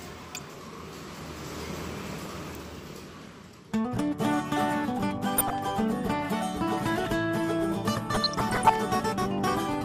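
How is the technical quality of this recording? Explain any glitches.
The technical quality is poor. A dull, band-limited sound with a gurgling, granular texture runs through the whole clip, and four short bursts of bubbling distortion sit on top of it.

MP2 compression is the likely cause of the dullness throughout, and the damage is plainly audible. The encoder splits the signal into 32 sub-bands and shares out a tight bit budget, which here fits a rate of around 80 kbps. Upper bands drop out, and the bands that remain are coarsely quantised and flicker on and off. Unlike a simple low-pass filter, the top end sounds swirly and unstable rather than cleanly cut.

DAB burbling occurs at 0.30–0.55 s, 2.25–2.38 s, 5.38–5.55 s and 8.10–8.74 s. The last burst is the longest and most severe. At low bit error rates of a few tenths of a percent, errors slip past the error correction into the MP2 data. 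Corrupted samples put short blips of noise into single sub-bands, and where corrupted scale factors get through, sub-bands jump in level for up to a frame, producing the burbling. Steady codec artefacts don't behave this way. These bursts come and go abruptly, while the compression dullness stays constant.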